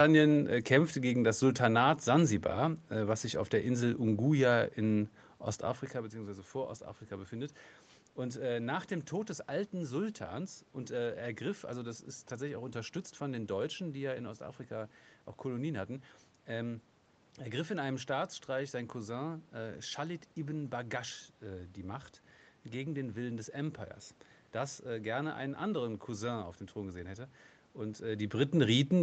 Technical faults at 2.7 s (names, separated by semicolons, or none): none